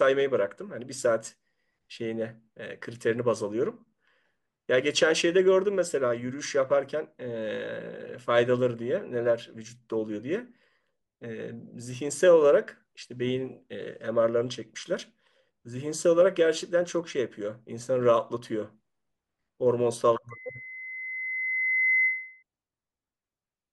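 Around 20.30 s a loudspeaker feedback squeal starts: the mic catches its own speaker, a 2 kHz tone swells over roughly a second and a half, ending near 22.43 s, a bit louder than the speech.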